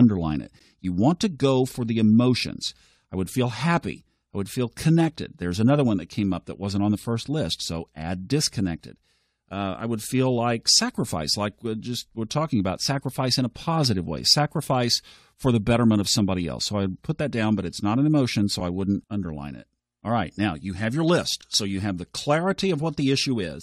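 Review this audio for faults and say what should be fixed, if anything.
Gap between stream segments at 0.59 s and 18.6 s (between "not an emotion so" and "I wouldn't underline it"): 6.0 s segments' timestamps leave about 12 ms and 6 ms of hard-edged silence, losing no speech. Fix it by making each segment's start timestamp match the previous segment's end exactly when packaging the stream.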